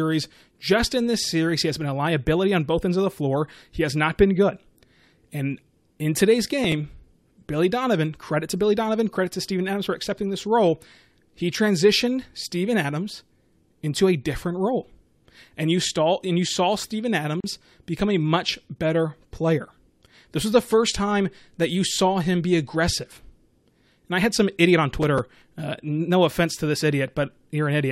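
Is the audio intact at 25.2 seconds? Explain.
No. At 25.2 seconds the speech is torn by a short burst of gritty crackle that runs from about 25.02 to 25.42 s, right after "had some idiot on". This is processor overload crackle: the processor could not finish its small audio buffers in time, and several deadlines were missed in a row. Each miss replayed a scrap of old audio with hard edges, which fits buffers of roughly 5 ms. The grating texture clears once the load eases.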